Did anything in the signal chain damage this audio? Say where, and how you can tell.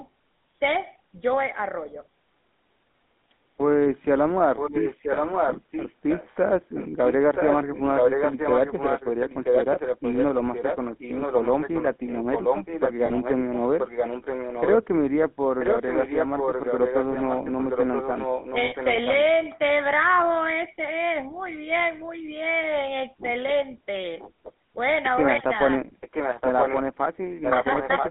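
Yes. The codec stage damaged the whole clip. This speech has the buzzy, gravelly roughness of the GSM full-rate codec. It is band-limited to roughly 200 Hz to 3.6 kHz, with nothing on top. The codec models the vocal tract and excites it with a coarse, regularly spaced pulse train, so the fine structure of the voice is lost. The damage is plainly audible, which fits the 13 kbit/s full-rate coder.

An echo leak in call processing returns a delayed copy of the speech about 0.98 s late and roughly 5 dB below the direct signal. It is heard from 4.56 to 14.78 s, from 15.59 to 19.22 s, from 26.01 to 26.82 s, and from 27.42 s to the end. The consistent delay points to a far end on loudspeaker whose echo canceller likely failed to remove the pickup, so the sound was sent back down the line.

Lost GSM frames in the network path appear as a short, rough metallic ring at 13.06 s, lasting 40 ms, and from 18.64 to 18.75 s, lasting 80 ms. 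The decoder replaced the bad frames by repeating the last good frame's parameters, which holds the sound as a ring instead of a gap. The lengths fit two and four 20 ms frames. The second loss falls inside an echo stretch.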